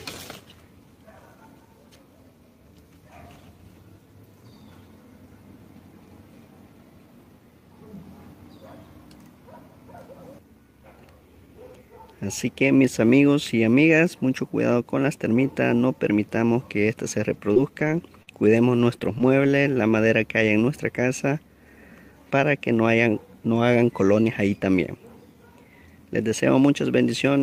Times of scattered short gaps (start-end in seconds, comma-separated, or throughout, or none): 17.21-19.46